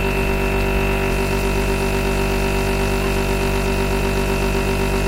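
Sharp single clicks cut through the sound at 1.62 s and 2.88 s, each a thin instant tick with no gap around it. These are most likely dropped samples, with well under a millisecond missing, so the waveform jumps abruptly to a later value. From 3.01 to 3.10 s comes a short, harsh burst, a squeaky blip reaching roughly -10 dBFS. A corrupt frame was decoded here: damaged data across a couple of compressed frames was played anyway, scattering energy into the wrong frequencies. At 4.0 s a third identical click marks another tiny dropped-sample jump.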